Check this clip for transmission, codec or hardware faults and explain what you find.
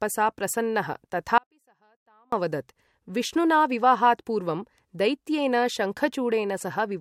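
One fault is present, an audio dropout to a faint residue, from 1.38 to 2.32 s. The wanted signal was likely interrupted upstream while the rest of the chain stayed active, so about 0.94 s of the speech is missing. The speech cuts off abruptly mid-flow, and the gap does not go silent. It holds a faint leak of the sound, roughly 40 dB below its normal level. Then the full-level speech snaps back in, with no fade on either side.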